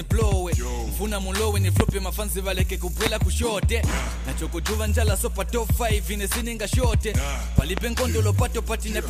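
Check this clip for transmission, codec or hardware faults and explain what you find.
Loud pops occur three times: two at 1.80–1.91 s, one at 3.06–3.09 s, two at 7.59–7.80 s. Each sharp thump stands around 20 dB above the sound, likely from brief voltage steps or pulses.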